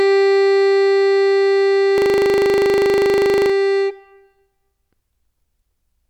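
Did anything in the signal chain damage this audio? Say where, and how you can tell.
Yes. A system hang loop at the driver and buffer stage froze playback from 1.98 to 3.50 s, replaying one 40 ms slice of music 38 times as a steady 25 Hz buzz.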